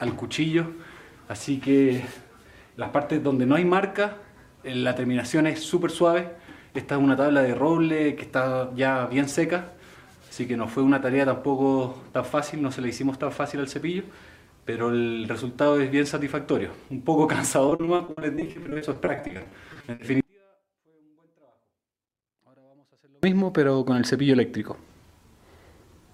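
The audio breaks up into choppy, robotic sound from 17.69 to 20.01 s, a stretch of repeated packet loss. About thirty short holes, none longer than 60 ms, are each bridged by stretching the previous sound, so roughly a third of this span is patched guesswork. The choppy stutter and rapid gaps set it apart from a single clean cut. From 20.20 to 23.23 s the sound drops abruptly for about 3 s, leaving only a faint residue far below its normal level. This is likely a dropout with the path still live, not a pause or fade, since it cuts rather than tapers.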